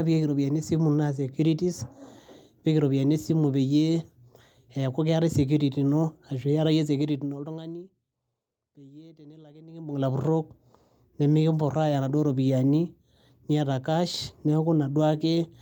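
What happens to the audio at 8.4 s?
Nothing goes wrong at 8.4 s: the speech carries on intact through that moment, with no dropout, click, distortion or sudden jump in level.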